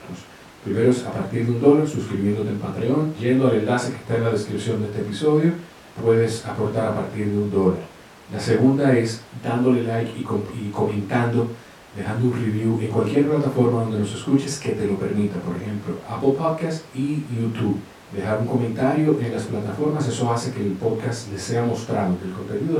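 Nothing in this speech recording stands out as a technical fault at any point along the way.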